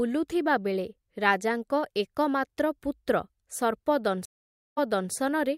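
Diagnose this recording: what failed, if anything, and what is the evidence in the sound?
The speech cuts out at 4.25 s for roughly half a second (518 ms), then resumes having jumped back about 0.35 s, so a stretch repeats before things settle by 5.12 s. This is a stream reconnect at the network stage: the connection dropped, the player reconnected, the server resent recent audio, and a fresh decoder started mid-stream.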